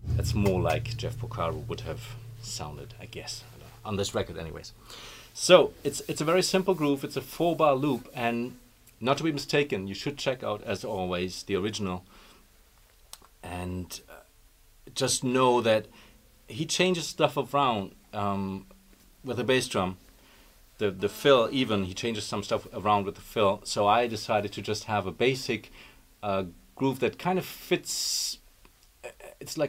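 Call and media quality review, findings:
GSM phone buzz, 21.00 to 21.87 s: raspy buzz at 216.7 Hz with a stack of harmonics, unrelated to the audio, about 23 dB below the signal. A nearby 2G handset on a call is bursting, and the audio circuitry is rectifying those radio pulses.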